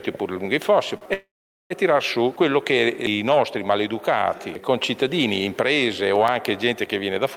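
The audio has three separate faults. At 0.97 s comes a short stall from a late packet: the jitter buffer briefly ran dry, so the last sound is held for about 38 ms, until 1.04 s, and then resumes from the same point with nothing lost. It is a slight smear rather than a cut, which separates it from a dropout. From 1.13 s to 1.73 s the sound stops moving forward for 570 ms. A brief fading continuation is followed by about 430 ms of silence, and then the audio picks up exactly where it left off. That is a call audio freeze, likely from packets held up in transit. It is a longer version of the stall, and because the same point resumes after the silence, it is a delay added to the sound rather than a gap where material was removed. Between 5.91 s and 6.52 s there are six CD scratch ticks, each only a few milliseconds long. They are regularly spaced at roughly eight per second and vary unevenly in strength. 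The disc turning past a blemish the error correction cannot rebuild would produce this. Their even rhythm sets them apart from random clicks or network glitches.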